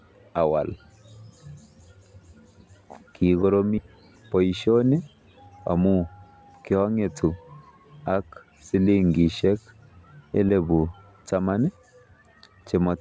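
Skip ahead at 3.78 to 3.80 s: about a second and a half of speech was discarded while later audio waited, so playback jumps forward with no gap filled. Jitter buffer speed-up from 3.87 to 5.86 s: the overfull buffer trimmed short pitch-period pieces repeatedly, roughly a third of a second in all, running speech at 112 percent with unchanged pitch. Throughout, nothing is heard above 8 kHz, which fits a G.722 call path.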